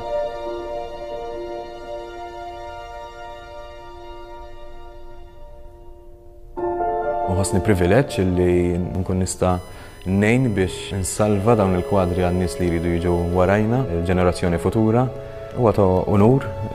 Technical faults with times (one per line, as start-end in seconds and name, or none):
9.49-13.49 USB whine